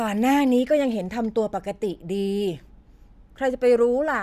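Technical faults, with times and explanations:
No technical faults can be heard in this speech.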